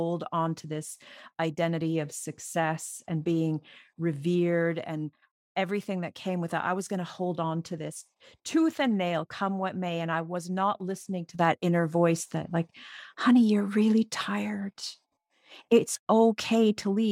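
At 11.35 s, just after "was not listening to", speech and background noise leap about 6 dB together and stay up: a sudden gain jump, likely an unramped gain change.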